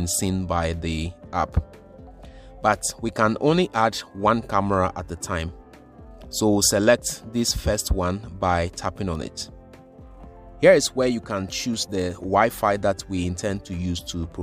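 No technical faults can be heard anywhere in the recording. There is nothing in the audio that calls for comment from a technical standpoint.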